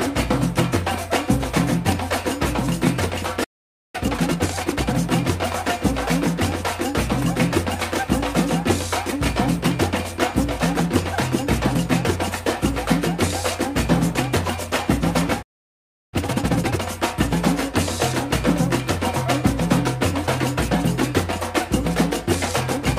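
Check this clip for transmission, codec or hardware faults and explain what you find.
Two playback stalls occur, each followed by a time-compressed catch-up.

Playback stall at 3.43 to 3.95 s and 15.42 to 16.14 s: the sound cuts to silence mid-flow for about 0.5 s, then 0.7 s, and resumes. The player likely ran dry of buffered data or had its output thread blocked.

Time-compressed catch-up at 3.95 to 4.95 s (1.5 times speed) and 16.14 to 16.84 s (2 times speed): to recover the lost backlog, the player splices out short slices and cross-fades the joins. The audio sounds rushed at its normal pitch.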